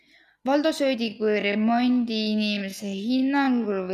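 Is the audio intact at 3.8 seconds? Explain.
No. At 3.8 seconds the speech is inside a time-stretched section that runs from 1.0 seconds to the end of the clip. The pace drops abruptly to half speed, yet the pitch does not fall. The likely cause is software stretching this part to fit a longer length. It would hold pitch by repeating short pieces of the audio.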